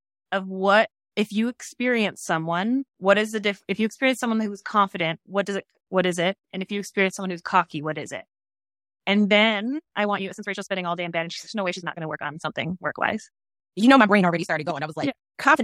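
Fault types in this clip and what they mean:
Time-stretched section: from 9.28 s on, speech plays 1.46 times faster at unchanged pitch, sounding rushed, likely software squeezing it to fit a length.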